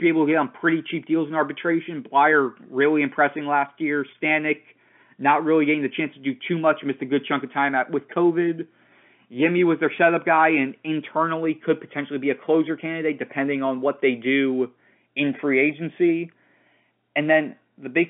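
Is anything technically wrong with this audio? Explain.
No, nothing in this speech clip is technically wrong. It carries the narrow sound of G.711 telephone coding, with the line band running from about 200 Hz to 3.4 kHz and nothing audible above 3.7 kHz, as expected for a normal phone call.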